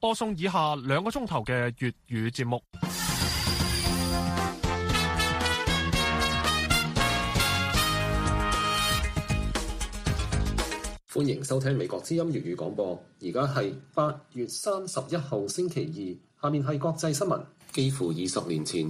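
At 9.70 s the sound jumps forward slightly. It's most likely a dropped buffer (overrun): the software didn't collect a block of samples before the hardware overwrote it, so that bit is lost and the audio on either side is butted straight together. There's no gap of silence, just a tiny skip of a few milliseconds, short enough that it registers as a small jolt in continuity.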